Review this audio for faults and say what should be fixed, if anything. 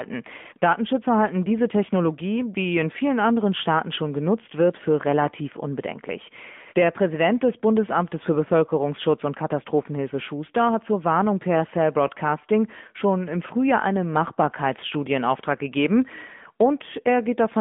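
The AMR narrowband mobile codec affects the whole clip: the speech is squeezed into a 150 Hz to 3.5 kHz telephone band, with nothing above 3.7 kHz, and the plainly audible buzzy, synthetic edge fits a mid-range rate near 10 kbps. A spectrogram shows a flat ceiling with empty space above. Prevent it by capturing or transferring through a wideband path, such as AMR-WB or a lossless link.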